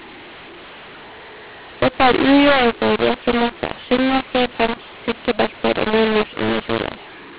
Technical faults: mu-law and A-law mixed up

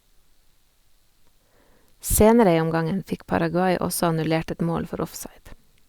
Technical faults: none

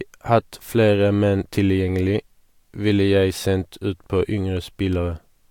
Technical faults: none

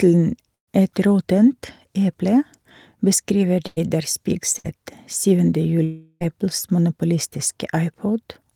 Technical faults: burst of packet loss; long network dropout

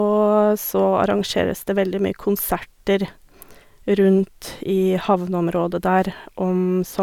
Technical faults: none

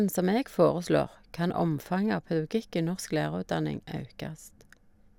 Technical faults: none

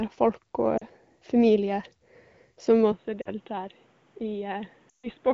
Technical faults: lost AMR speech frames; input switched to a poorer device

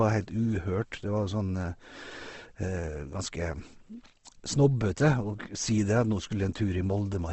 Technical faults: Opus compression

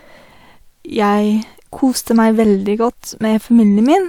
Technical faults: none

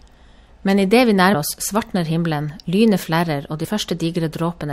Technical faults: compressed frames skipped

